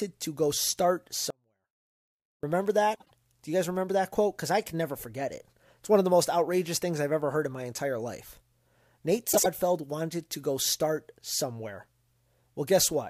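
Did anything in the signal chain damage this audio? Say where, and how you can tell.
Yes. The first fault is an audio dropout to a faint residue, likely from a transport or buffer stage that lost the signal while the path downstream stayed live. Right after "to go start", the speech cuts out abruptly at 1.30 s and returns at 2.43 s, a gap of about 1.1 s. Only a faint trace of sound, roughly 35 dB below the speech, remains in that gap. The edges are sudden, not the shape of a natural pause or a fade.

The second fault is frames out of order, a packet or frame sequencing error in the network or codec stage. Neighbouring blocks of about 52 ms each were decoded in swapped order, which fits runs of two frames each. This happens at 2.95 to 3.11 s and again at 9.32 to 9.46 s, just before "wanted to go start". Each stretch plays as a brief garbled flutter, and no time is lost from the clip.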